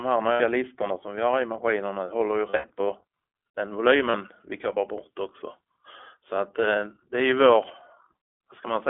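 Speech through the iLBC codec, narrowband at about 15 kbps. Nothing passes outside roughly 300 Hz to 3.4 kHz, and the coding roughness is plainly audible. Lost iLBC frames occur at 0.32 to 0.42 s, 2.50 to 2.70 s and 4.10 to 4.15 s. The decoder fills each gap with a held, buzzy repeat of the last pitch cycle. The middle loss is scattered, with runs of up to about 70 ms.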